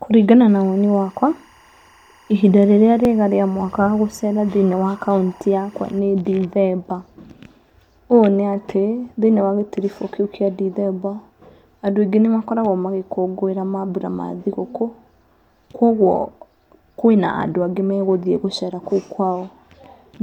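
From 0.48 to 5.99 s, just before "nĩ ndithemba", timecode bleed sits under the speech. Linear timecode has leaked in from a nearby track or cable. Its square wave flips between tones near 1 and 2 kHz. That makes a steady chirping warble, about 35 dB below the speech. The rate fits 24-frame code.

At 3.05 s comes a repeated buffer. New audio arrived late, so one 1.33 ms chunk played twice. This fits a 64-sample buffer. It sounds like a single click. At 7.38 s, right after "nĩ ndithemba", a 1.33 ms chunk plays four extra times. That gives a brief buzz.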